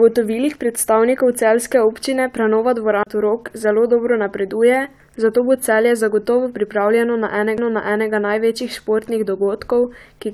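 The laser jumped tracks in two CD skips, at 3.03 to 3.07 s and at 7.57 s. Each brief mute lands the speech at a different point.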